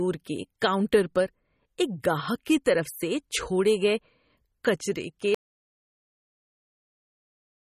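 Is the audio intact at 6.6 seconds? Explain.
No. The input likely dropped out at 5.35 s, and the recorder went on writing silence through to the end of the clip. At 6.6 s there is an audio dropout to silence: complete silence with no room tone, and whatever was said there is lost.

The whole clip also carries MP3 compression damage, likely from encoding with too few bits, in a way that fits a rate near 32 kbps. Nothing is present above 15.2 kHz, and the speech before the gap has a plainly audible watery, swirly quality with smeared attacks.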